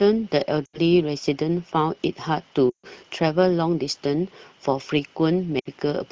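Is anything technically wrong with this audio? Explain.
Yes. There are lost AMR speech frames at 0.66–0.80 s, 2.70–2.86 s and 5.59–5.68 s. Radio errors corrupted frames, so the decoder repeated the last good pitch and vocal-tract settings with falling gain. Each gap drops to near silence within two frames. On a spectrogram it shows as frozen harmonics, and on the waveform as a tapering envelope, longest in the middle event. The wideband codec itself sounds clear.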